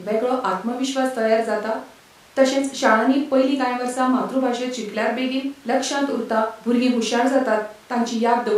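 There are no technical faults to describe in this speech recording.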